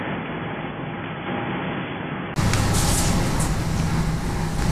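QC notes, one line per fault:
0.00–2.36 s, input switched to a poorer device: dull, slightly quieter sound cut above 3.4 kHz with faint background noise, then a 20 ms gap; likely a narrower-band microphone.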